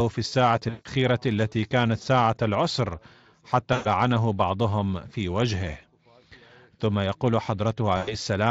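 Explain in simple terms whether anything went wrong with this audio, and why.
Yes, a few things went wrong. Around 0.69, 3.73 and 7.97 seconds, the call briefly lost audio packets. This is VoIP packet loss concealed by the speech codec. Each time, the decoder stretched the last bit of sound into a buzzy or noisy, fading smear, and the speech stays weak for a moment afterward.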